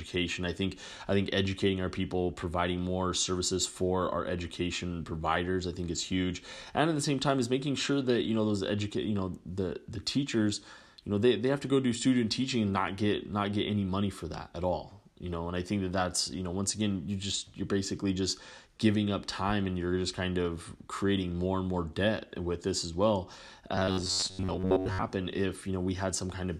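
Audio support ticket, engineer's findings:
Robotic sound from repeated short buffers, 23.73 to 25.04 s. Speech collapses into a stiff metallic buzz at 93.8 Hz that still roughly tracks the talking. Likely a starved playback/receive buffer, with the last ~10.7 ms looped while real audio gets dropped. Most of that stretch, roughly 70%, is repeats.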